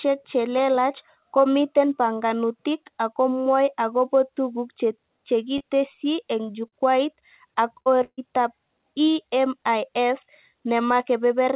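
At 5.58 to 5.62 s there is a short concealed packet loss. About 20 ms of the call arrived too late to play. The receiver filled the gap by carrying the last sound forward, then blended back into the real audio. It sounds like a brief smear. Two longer ones follow, at 6.68 to 6.74 s and 7.82 to 7.88 s, each about 40 ms. These give a small wobble, and a short sound can drop out.

A burst of packet loss runs from 8.04 to 8.19 s. About 140 ms never arrived. The receiver kept extending the last sound and faded it down. A voiced sound turns into a held buzz and anything else into a fading hiss. The last 50 ms go silent before the audio resumes further on, with the missing stretch skipped. Throughout, nothing reaches above 4 kHz, which fits the G.711 A-law call codec.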